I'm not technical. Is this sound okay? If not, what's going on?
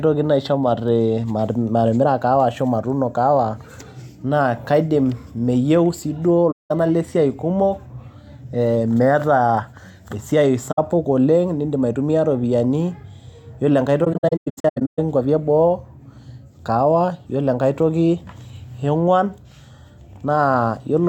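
No. The speech drops out three times because of AAC frame loss with muting. Chunks of the compressed audio went missing, and the decoder filled each gap with silence. The sound fades out and back in rather than cutting sharply. The first gap runs from 6.51 to 6.71 s, right after "kaidim meyieu sii duo". A shorter one falls at 10.71 to 10.79 s. From 14.04 to 14.99 s, several small holes break up the speech. The longest lasts roughly 150 ms.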